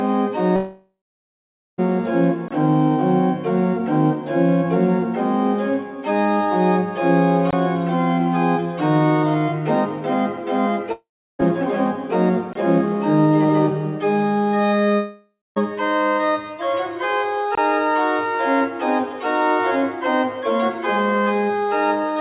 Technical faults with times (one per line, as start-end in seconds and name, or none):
0.56-1.80 long network dropout
2.48-2.51 gap between chunks
7.51-7.53 gap between chunks
10.92-11.41 long network dropout
12.53-12.55 gap between chunks
14.96-15.58 long network dropout
17.55-17.57 gap between chunks